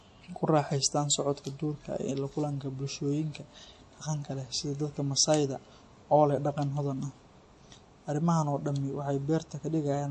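From start to finish the speech sounds dull and watery, with nothing above 11.4 kHz and a plainly audible swirl. This is likely MP3 compression, at a low bitrate that fits about 48 kbps, where the encoder cut the treble and dropped weak frequency detail to save bits.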